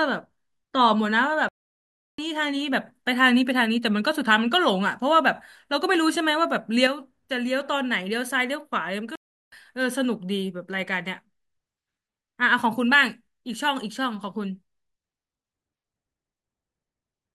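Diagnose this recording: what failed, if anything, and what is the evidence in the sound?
The speech cuts out twice in mid-flow, from 1.49 to 2.18 s (about 0.70 s) and from 9.15 to 9.52 s (about 0.37 s), then carries on. This is a playback stall at the playback stage, likely the player running out of buffered data or its output thread being blocked until it recovered. On a waveform each stall is a flat, silent stretch. On a spectrogram each one is a clean vertical gap that is blank across all frequencies, with hard edges on both sides.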